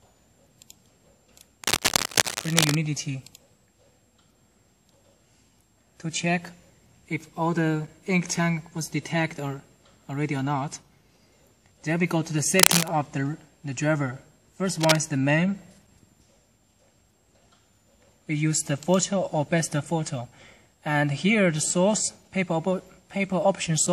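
Cable scratch noise appears three times: from 1.64 to 2.75 s, from 12.57 to 12.88 s, and from 14.80 to 14.96 s. Dense, uneven bursts of scratching lie over the sound, about as loud as it in the first and last events and somewhat louder at 12.57 s. The likely cause is a worn cable or connector being moved and changing its contact resistance. Unlike isolated clicks or a dropout, the noise is continuous and rough, and the sound underneath carries on.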